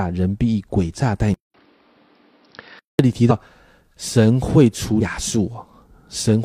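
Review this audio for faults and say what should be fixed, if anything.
From 1.34 to 2.99 s the speech turns dull and boxy, with nothing above 5.6 kHz, a 200 ms gap at the switch, a level about 5 dB lower and new noise about 35 dB down. This is likely an input switched to a poorer device, and the changed noise floor distinguishes it from a simple filter. To prevent it, lock the recording input so the system cannot swap devices mid-session.

At 3.26 to 3.32 s and 4.97 to 5.02 s, compressed frames are skipped. The audio jumps ahead by roughly 100 ms and then 150 ms, in whole steps of 42.7 ms frames. The jump by whole frames at each join sets this apart from a sample-level dropout. To prevent it, check the file's integrity and deliver it over a transport that resends lost data.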